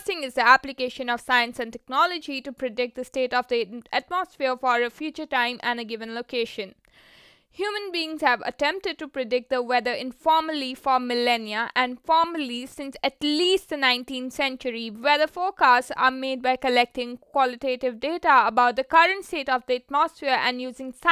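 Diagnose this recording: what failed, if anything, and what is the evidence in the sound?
Nothing failed in this recording; no stage of the chain leaves an audible mark on the speech. There is no event in the sound to point to, so there is no mechanism to trace.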